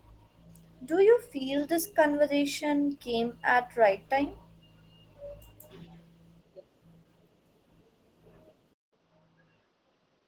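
From the start, the speech carries plainly audible Opus voice compression. The hybrid mode codes the lower band with linear prediction and the top band coarsely, which fits a rate near 16 kbps. The result is a hoarse, slightly robotic texture across the full band.

At 8.73 s the sound cuts out for about 0.19 s and returns duller, with nothing above 6.4 kHz, a little quieter, and a new noise floor well below the speech. This is likely the input switching to a poorer device, and the change holds to the end.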